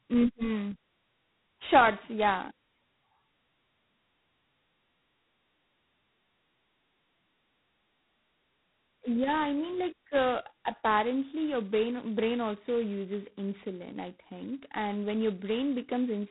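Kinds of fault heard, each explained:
G.726 ADPCM: The speech has gone through an adaptive differential coder that sends only the difference between each sample and a running prediction, with very few bits to spend on it. The sound points to the lowest, 16 kbit/s mode. Heavy quantisation error rides on the speech as a harsh, rasping hiss that rises and falls with its level throughout, and nothing above 3.9 kHz survives, leaving it dull and band-limited.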